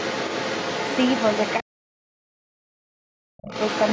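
From the start to 1.63 s, a second voice sits behind the main speech, roughly 10 dB below it. This is the other side's voice leaking through. The likely cause is the device's loudspeaker feeding back into the microphone, with the echo canceller leaving part of it behind. The same leak returns at 3.5 s and runs to the end of the clip.

Between 1.62 s and 3.51 s, the main speech is suppressed in double talk. The talker's level sinks hard, by as much as roughly 40 dB at its deepest. The voice breaks into dull, patchy fragments for about one and a half seconds in total. Both sides are talking here. The echo canceller likely cannot tell the near voice from the echo, so it pulls down everything at once.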